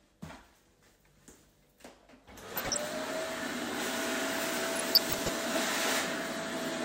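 Everyday sound with DAB burbling at 0.66–0.92 s, 2.52–2.78 s and 4.76–5.29 s: short noise blips as residual bit errors, a fraction of a percent, corrupt MP2 scale factors and samples, making single sub-bands jump in level frame by frame.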